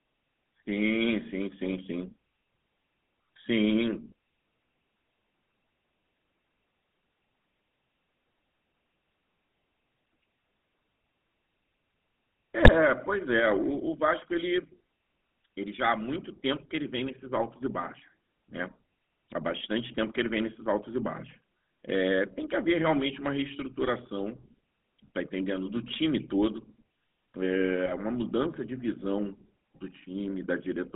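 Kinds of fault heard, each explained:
GSM full-rate codec: The speech runs through a vocal-tract model excited by a sparse, regularly spaced pulse train, so only part of the excitation detail survives. The result here is a plainly audible buzzy, gravelly roughness throughout. The line band sits at roughly 150 Hz to 3.6 kHz, so there is nothing in the upper range and the low end is thin. The overall character fits the 13 kbps full-rate coder.
GSM bit errors: Corrupted bits reach the decoder and scramble the filter, pitch and gain parameters for individual frames. The spectrum briefly bends out of shape or the level spikes. Two short bursts are audible, at 12.63 to 12.70 s and 27.86 to 27.97 s. Each breaks into a squawking, gargled disturbance that corresponds to a few damaged frames, consistent with an error rate around 1.4 to 1.5 percent on a weak link.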